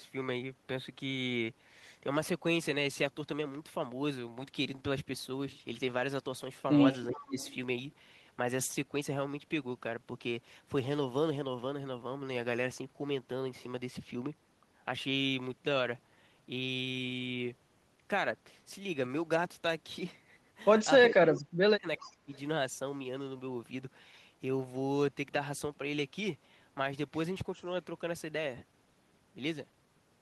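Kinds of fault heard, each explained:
Speech suppressed in double talk: the echo canceller likely could not tell this talker from the loudspeaker echo while both sides spoke, so it turned the voice down. Around 7.1 s it dips by about 10 dB, and from 21.09 to 22.32 s it falls by about 30 dB.
Echo leak: the far end's echo canceller likely let part of its loudspeaker pickup through, sending back a copy of the voice delayed by 392 ms. It is a faint trace, about 25 dB down near 7.1 to 7.5 s, then brief scraps about 30 to 35 dB down between 21.37 and 22.39 s.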